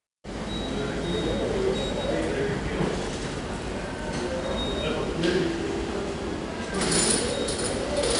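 Throughout, the audio was stored as 4-bit ADPCM compression, which codes each sample as a coarse adaptive step from a prediction. Gritty hiss rides on every loud passage, sharp attacks distort, and nothing sounds above 10.6 kHz, which fits a rate near 89 kbps.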